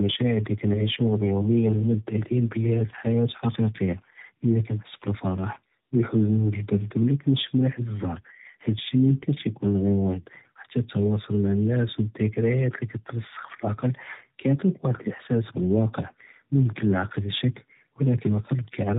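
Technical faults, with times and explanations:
Throughout, tandem speech coding: the speech sounds rough, muffled and warbly, in the way audio does after passing through several speech codecs in a row, here three, ending in AMR-NB. Each coder rebuilds the last one's flawed output and adds its own errors. On a spectrogram nothing shows above about 3.8 kHz, and the harmonics look smeared and blotchy instead of cleanly striped. The waveform looks normal in level but coarse in detail.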